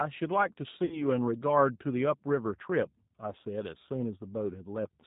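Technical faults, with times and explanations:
Throughout: G.729 codec. The speech sounds plainly narrowband, rough and a bit synthetic, which fits an 8 kbit/s G.729A stream. It rebuilds each frame from a vocal-tract filter, pitch predictor and a few pulses, and nothing above 4 kHz survives.
0.85 to 1.05 s: VoIP packet loss concealed by the speech codec. About 60 ms of audio goes missing, which fits three lost packets. The decoder stretches its last pitch and filter into a fading buzzy tone or coloured noise, and the speech stays weak or distorted for a bit after because each frame builds on the previous one.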